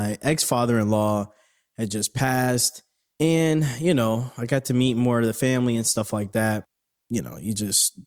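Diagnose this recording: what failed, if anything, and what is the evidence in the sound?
Nothing failed here: the speech runs without any audible fault at any stage of the chain.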